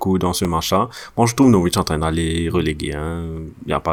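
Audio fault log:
0.45 s, block of digital silence: the speech stops dead for about 0.67 ms and resumes, with no fade on either side. Such a short hole is heard as a single tick, with the abrupt step to zero and the step back merging into one click. Unlike a lone-sample spike, the waveform here drops flat to near zero for a short span. Unlike a smoothed dropout, the edges are hard cuts.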